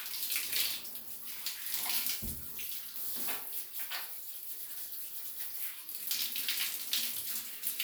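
Everyday sound recording; no technical faults found.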